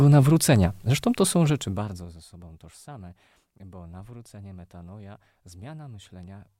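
Zipper noise runs from 1.47 to 2.22 s, between "to są" and "sobą tożsame bo nawrócenie". The speech drops about 20 dB in unsmoothed 1 dB steps. Each step clicks. At roughly fifty steps a second, the clicks form a fast ticking.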